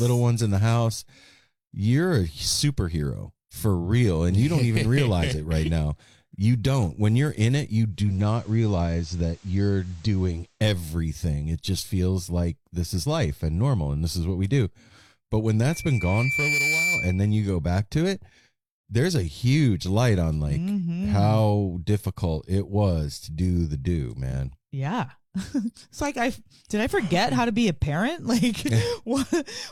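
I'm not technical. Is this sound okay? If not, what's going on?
No. From 7.89 to 10.63 s, just after "you're in it you", the radio loses its digital signal and does a digital radio blending to analogue, sliding over to FM in under half a second. The sound drops very slightly in level and picks up faint hiss. That gradual slide is what separates it from a plain dropout.

From 15.70 to 17.36 s, ending just before "go back to it", there is a loudspeaker feedback squeal. A microphone is hearing its own speaker, and a single tone at 2.3 kHz swells over about a second until it is as loud as the speech. Unlike a beep, it grows by itself rather than starting at full strength.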